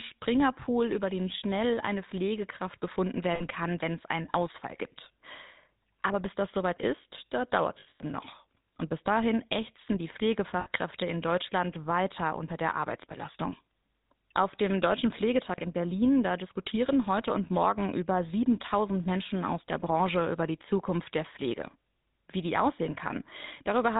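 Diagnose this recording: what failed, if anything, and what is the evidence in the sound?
The codec stage failed: the speech has passed through the GSM full-rate codec, and its damage is plainly audible for the whole recording. The voice has a buzzy, gravelly grain, consistent with 13 kbps full-rate coding. The codec rebuilds speech from a vocal-tract filter driven by sparse, regularly spaced excitation pulses, which causes the roughness. On a spectrogram, energy stops sharply at 4 kHz and harmonics look smeared. The waveform shows a coarse, pulse-like texture.

Frames were lost on the network or radio link, giving lost GSM frames at 3.34 to 3.43 s, 7.80 to 8.01 s and 10.60 to 10.68 s. The first and third gaps are 60 ms each, fitting a few consecutive 20 ms frames. The middle one loses 160 ms scattered over 200 ms, with a longest run of roughly 100 ms. The decoder repeats the last good frame at falling level, so each gap sounds as a metallic ring, visible as a flat, stretched band in the spectrogram.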